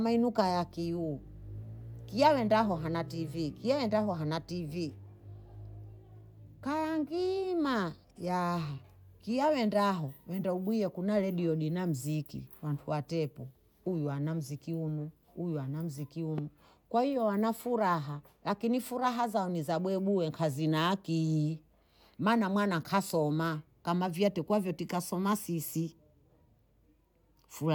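At 16.38 to 16.41 s a single loud pop cuts through the speech, a sharp impulse lasting about 25 ms that peaks roughly 10 dB above the surrounding level. The speech continues underneath without a break, so the impulse sits on top of the signal rather than replacing it. The most likely cause is a sudden voltage step entering the chain, from a connector, a switch, static discharge or a driver glitch, which the downstream circuitry shaped into a brief transient.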